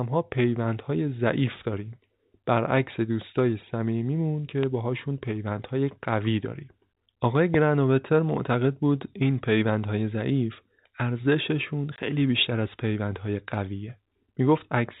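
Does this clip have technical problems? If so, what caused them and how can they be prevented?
Yes. Loud pops occur at 4.63 to 4.65 s and 7.54 to 7.56 s. Each is a single sharp click, roughly 15 dB above the speech. A switch, plug or static discharge likely caused them. Secure connectors and ground the equipment to prevent them.

Packet loss filled with silence cuts a 20 ms hole at 11.96 to 11.98 s. This fits one dropped packet in the narrowband telephone-quality speech. Use a steadier network or packet loss concealment to prevent it.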